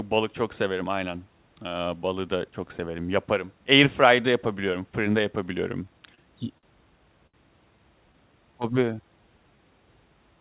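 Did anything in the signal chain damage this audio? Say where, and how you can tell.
Yes. The damage is in the network and jitter-buffer stage of a call path, whose band limit of 4 kHz fits a narrowband call codec. Two kinds of fault show up there.

Short stalls from a late packet occur three times: at 6.15 to 6.20 s, at 6.58 to 6.65 s, and at 7.27 to 7.36 s. Each time a sound hangs too long, by about 33, 50 and 66 ms. Nothing is skipped. A packet arrived late and the buffer ran dry. The receiver stretched the last sound until the packet came, then resumed from the same place. Each stall adds its length to the delay.

A jitter buffer slow-down follows from 8.06 to 9.57 s. The audio drags at about 92% speed, but the pitch stays the same. Sounds are drawn out, and about 130 ms is added in total. The buffer was rebuilding its reserve. It did this by repeating single pitch periods and bits of pauses over and over, which slows the audio without lowering the pitch.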